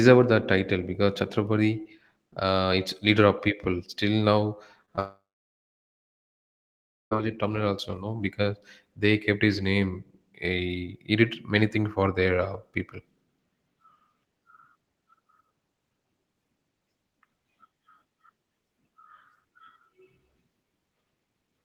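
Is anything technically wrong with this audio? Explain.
Yes, there are two related problems in this speech clip, both clustered around the five-second mark.

First, short concealed packet loss at 4.85–4.90 s and again at 4.96–4.99 s. In each spot about 20 ms of the stream didn't reach the decoder in time, so the receiver papered over the gap by extending the previous sound for roughly 22 ms and 16 ms, then crossfading back. You hear it as a quick smear or wobble rather than a clean cut.

Right after that comes a long network dropout from 4.99 s to 7.13 s, likely a stall in packet delivery. About 2.1 s of audio never shows up. The receiver briefly keeps the last sound going as a fading buzz or hiss, then it's essentially silence for roughly 1.9 s. The speech picks back up with "terminal also", and whatever was said in the gap is simply gone.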